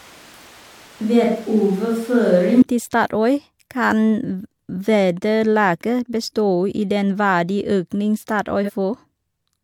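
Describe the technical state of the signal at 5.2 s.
At 5.2 s the speech signal is intact, with no audible fault at that moment.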